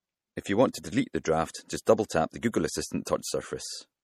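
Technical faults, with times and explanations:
Throughout, MP3 compression: watery, swirly treble with clipped high end and smeared consonants, which fits a likely bitrate around 48 kbps starving the encoder.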